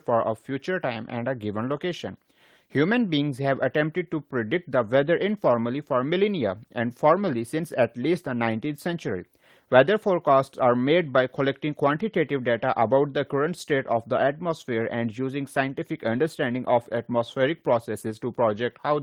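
No technical faults can be heard in this recording.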